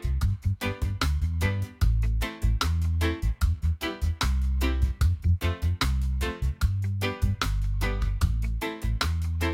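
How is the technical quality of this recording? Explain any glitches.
The technical quality of this recording is sound, with no glitches to explain.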